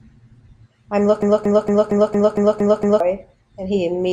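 From 1.22 s to 3.0 s the speech sticks in a broken-record loop. A fragment of about 230 ms repeats exactly, back to back, eight times. This likely comes from a stalled player or stream resending its last fragment. The speech due in that span is lost.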